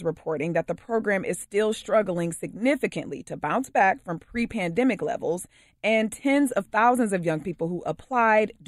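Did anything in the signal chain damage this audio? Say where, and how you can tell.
No, nothing in the signal chain damaged this speech.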